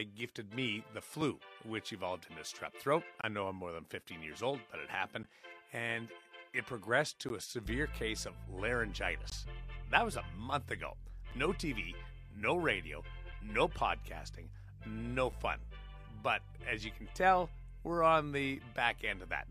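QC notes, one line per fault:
1.21, 3.21–3.24, 5.23, 7.29, 9.30, 11.31, 13.32 and 15.32 s: gap between stream segments. Eight hard-edged holes of silence, from about 3 ms to 26 ms long, recur every 2 s, which fits 2-second segments whose time stamps don't quite meet. The player fills each small mismatch with silence, so the sound drops out abruptly and resumes with nothing missing; the added time only delays what follows.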